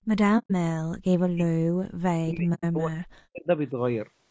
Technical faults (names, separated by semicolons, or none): low-delay AAC compression; AAC frame loss with muting; speech suppressed in double talk